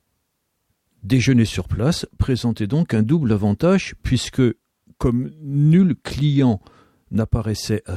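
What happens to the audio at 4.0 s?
Nothing goes wrong at 4.0 s; the audio plays through that moment intact, with no dropout, click or other fault.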